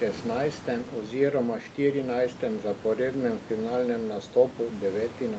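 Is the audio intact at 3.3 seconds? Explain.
Yes, the audio is intact at 3.3 seconds, with only the normal call microphone processing and room noise sitting about 17 dB below the speech.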